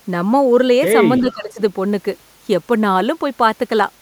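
From 1.21 to 1.59 s the speech dips about 10 dB, narrowing the waveform and dimming the spectrogram, likely speech suppressed in double talk.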